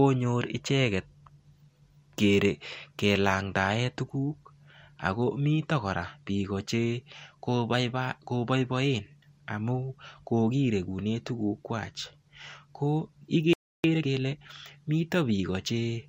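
A speech clip with a playback stall at 13.53 s: the voice cuts off mid-flow and the output is silent for about 0.31 s until 13.84 s, likely because the player ran out of buffered data or its thread was blocked. On a waveform this is a flat, empty gap; on a spectrogram, a clean vertical blank band across all frequencies. Time-compressed catch-up follows from 13.84 to 14.44 s, with speech hurried to 1.5x speed at normal pitch as small pieces are cut and cross-faded away. The spectrogram shows harmonics at unchanged heights but syllables squeezed closer together.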